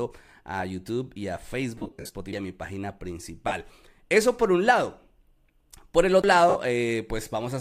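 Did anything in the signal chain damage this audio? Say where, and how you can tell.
Yes. Between 1.77 and 2.15 s the speech breaks into a hissy, smeared texture, with brief gaps scattered over roughly 375 ms that add up to about 262 ms, the longest run around 70 ms. Shorter smears follow at 3.48 to 3.51 s (about 30 ms) and 6.49 to 6.55 s (about 60 ms). These are lost LE Audio frames, a wireless-transport problem. When a frame never arrived, the decoder refilled the gap from the previous spectrum with scrambled phase, which turns harmonics into noise. The loss durations fit 7.5 ms LC3 frames, so the link was likely carrying Bluetooth LC3 audio.

Playback-stage CD skips show as a tick and a discontinuity at 2.33 s, with a mute of a few milliseconds, and again at 6.22 s, with a mute of around 20 ms. Each time the sound resumes abruptly rather than continuing smoothly. That pattern fits a disc reader whose laser lost tracking and relocked on a different turn of the spiral. 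The player silenced its output during the jump, and the audio picked up from a displaced point.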